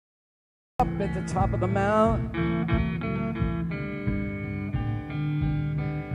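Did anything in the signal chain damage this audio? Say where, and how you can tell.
Yes. The clip has a cut-off start: there is digital silence from 0.0 s until the sound jumps in abruptly at 0.80 s, already mid-sound, with no attack or fade. That points to the capture or stream starting late, at the driver or buffer stage, so the beginning of the event was never recorded. On a waveform the flat zero line ends in a sudden step. A spectrogram shows a blank region and then a hard vertical edge where energy appears across all frequencies at once.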